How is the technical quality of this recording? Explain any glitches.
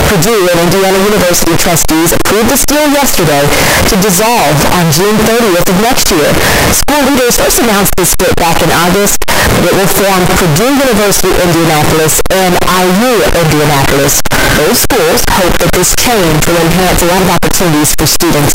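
The technical quality is very poor. For the whole recording, the sound is a float read as integer: a nearly square, harsh, loud waveform at an almost fixed, high level. It is likely 32-bit float data decoded as 32-bit integers. Unlike clipping, quiet background noise becomes as loud as everything else, though pitch remains traceable.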